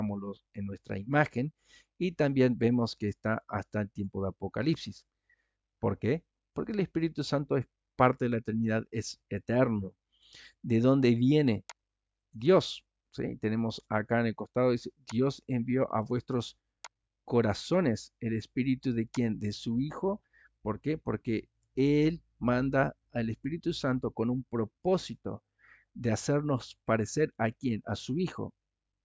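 No technical faults can be heard anywhere in the audio; the signal stays steady and intact throughout.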